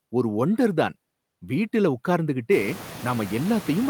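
Noise suppressor artifacts run throughout, pulling the background down by about 17 dB band by band, unlike a gate's all-or-nothing switching, most audibly once the room noise jumps around 2.5 s.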